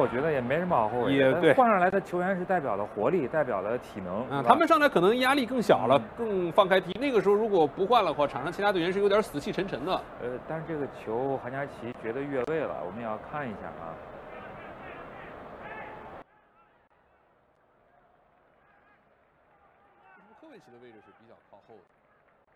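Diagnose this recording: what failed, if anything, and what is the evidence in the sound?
From 16.22 s to the end, the sound drops to a faint remnant about 22 dB quieter. This is likely one channel inverted in the analogue wiring. With one side's polarity reversed, everything common to both channels cancels when they are summed to mono.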